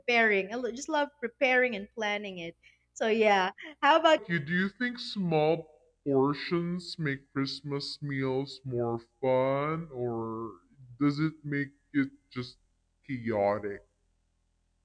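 Wrong sample rate from 4.18 s, after "yeah how": playback fits 32 kHz material at 22 kHz, slowing to 0.69 speed, about 6.5 semitones lower.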